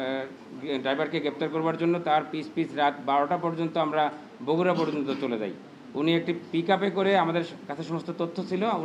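A faint, gritty, inharmonic fizz clings to loud and high sounds from 3.97 to 6.28 s, a crude rate conversion whose linear interpolation fits a 32 kHz to 48 kHz change, leaving errors roughly 45 dB down.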